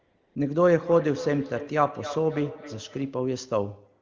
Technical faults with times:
0.00-0.35 AMR comfort noise
0.83-3.21 feedback echo between two devices

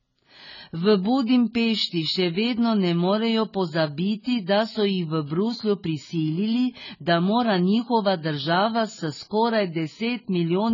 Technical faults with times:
0.00-10.73 AAC compression

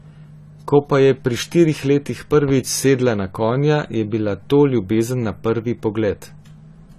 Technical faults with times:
0.00-6.98 AAC compression
2.34-2.52 loud pop

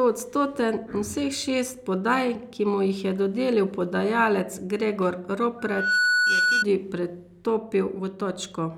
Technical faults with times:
5.58-6.65 loudspeaker feedback squeal

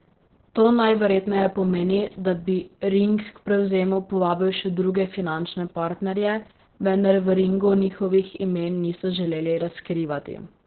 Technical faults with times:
0.00-10.66 Opus voice compression

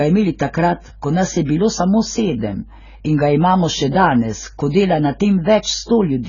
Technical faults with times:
0.00-6.29 AAC compression

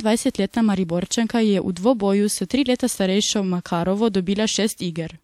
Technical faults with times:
1.08-1.11 pre-echo

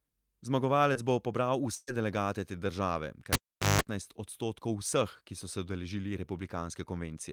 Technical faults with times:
0.93-0.97 short concealed packet loss
1.75-1.89 burst of packet loss
3.33-3.82 cable pulled and plugged in

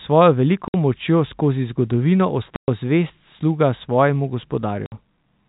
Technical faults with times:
0.68-0.74 packet loss filled with silence
2.56-2.68 packet loss filled with silence
4.86-4.92 packet loss filled with silence

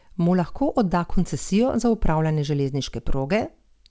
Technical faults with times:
0.00-3.90 clock drift between sender and receiver
0.62-3.64 repeated timing corrections

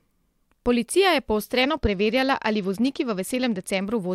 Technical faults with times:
1.62-3.85 Bluetooth SBC bit pool drop

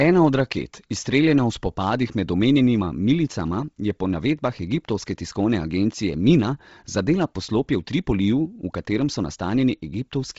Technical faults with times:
0.00-10.39 Bluetooth LC3 compression

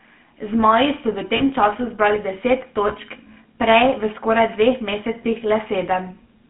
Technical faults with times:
0.00-6.50 GSM full-rate codec
1.36-1.42 lost GSM frames
2.88-2.92 lost GSM frames
5.22-5.26 lost GSM frames

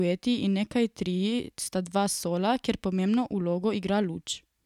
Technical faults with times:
none

